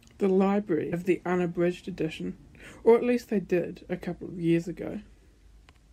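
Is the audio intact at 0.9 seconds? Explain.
No. Damaged data in a compressed stream at about 0.92 s, just before "the unabridged edition or": corrupted bytes make the decoder lose frame sync and resynchronise, producing a brief blip.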